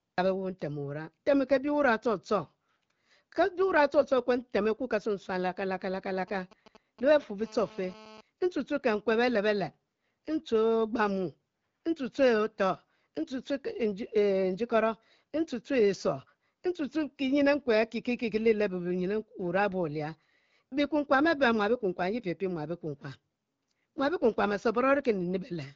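From 6.19 to 7.24 s, GSM signalling bursts appear: a nearby 2G phone's radio pulses are rectified, giving a galloping dit-dit-dit of short 217 Hz buzzes, well below the speech. From 7.41 to 8.21 s, a steady GSM phone buzz follows. The phone is now transmitting in bursts 217 times a second, producing a hard, raspy tone about 23 dB below the speech that ends just before "ntue tue kekue".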